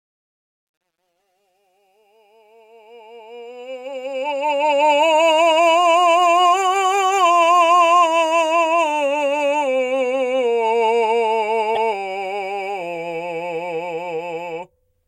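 Truncation distortion on a fade runs from the start to 4.90 s, during the fade-in of this music. The gain stage holds the signal at what sounds like about 11 bits with no dither, so the quietest part of the rising fade is forced onto a handful of coarse square steps. From 0.0 to 2.92 s, where the level is lowest, the sound is gritty, smoothing out as the fade climbs toward full level at 4.9 s.

At 11.74 to 11.77 s the music jumps forward with a brief glitch lasting about 30 ms. The likely cause is a broken MP3 bit reservoir. Frames were lost at that point, so the following frame, which draws part of its data from earlier frames, decoded bytes belonging to the wrong frame. The span is close to a single 26.1 ms frame, so the damage is over almost at once.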